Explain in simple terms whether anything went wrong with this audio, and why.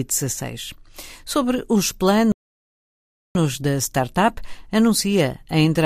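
A playback stall hits at 2.32 seconds. The speech cuts off mid-flow and the output goes completely silent for about one second, until 3.35 seconds, when it picks up again with "da startup anuncia a". The likely cause is that the player briefly ran out of audio data or was held up by something else on the device. It had nothing to send to the speakers, so it paused until data arrived and then carried on.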